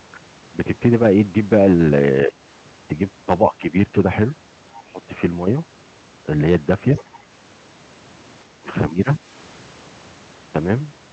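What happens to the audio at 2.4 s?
The speech dips sharply, by around 20 dB, from 2.27 to 2.4 s, which is likely speech suppressed in double talk: the echo canceller mistook overlapping talk for echo.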